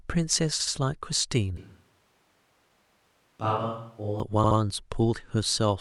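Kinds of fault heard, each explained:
Repeated frames: At 0.59, 2.87 and 4.43 s, a stretch of compressed audio is decoded again, so the speech stutters. A 72 ms block plays twice more at the first and last points, a 144 ms block once more at the second, each adding 144 ms.
Switch to a distant microphone: From 1.57 to 4.2 s the speech abruptly turns hollow and roomy, thinner in the bass and about 10 dB quieter, with background noise roughly 35 dB below it, likely because a farther microphone replaced the close one.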